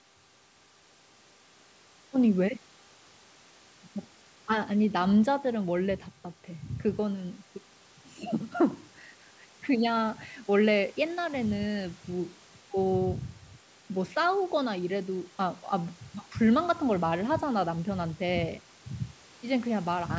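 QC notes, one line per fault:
No faults found; the speech carries the ordinary shaping of call microphone processing, with the lowest bass trimmed and nothing above 8 kHz.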